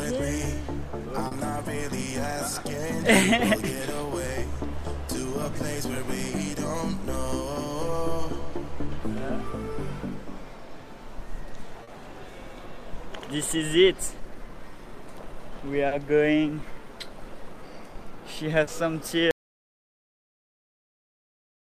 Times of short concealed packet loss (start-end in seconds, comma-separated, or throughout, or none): 1.27-1.34, 11.83-11.90, 15.87-15.94, 18.63-18.70